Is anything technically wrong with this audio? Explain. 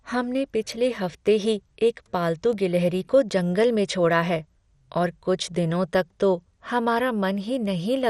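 Yes, two faults are audible in this speech clip.

Likely MP2 compression, throughout: nothing above 15 kHz, with dull, gurgling, granular distortion, consistent with a low bitrate around 64 kbps where upper sub-bands drop out and the remainder is coarsely quantised.

Bit error spikes at 0.72, 2.53, 3.63 and 7.66 s: each is a single corrupted sample jumping by a power of two, heard as a sharp broadband tick unrelated to the speech.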